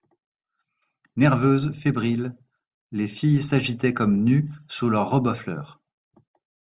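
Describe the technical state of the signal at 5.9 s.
At 5.9 s the speech signal is intact, with no technical fault present at that moment.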